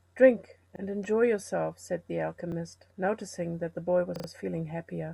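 Short stutters interrupt the speech at 0.76 s, 2.52 s and, at greater length, from 4.16 to 4.28 s. These are repeated buffers: when fresh audio arrived late, a 40 ms piece was replayed once, then three extra times, with hard joins.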